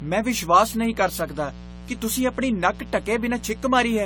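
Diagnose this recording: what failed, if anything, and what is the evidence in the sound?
A steady, raspy buzz sits under the speech for the whole clip, about 15 dB below it, with a 60 Hz fundamental and a dense stack of harmonics climbing into the kilohertz range. This is mains buzz entering in the analogue wiring: a dimmer, rectifier or unshielded run injects sharp switching spikes on every half-cycle of the 60 Hz supply, and those spikes are rich enough to spray harmonics well above the hum itself.

Throughout, the speech sounds swirly, smeared and hollow, with consonant attacks blurred and the spectrum ending at 19.5 kHz. This points to the codec stage: the damage is heavier than a single AAC-LC pass at around 64 kbit/s would leave, which fits generation loss from likely several decode-and-re-encode cycles, around seven. Each pass quantised again on a shifted frame grid, so the noise accumulated.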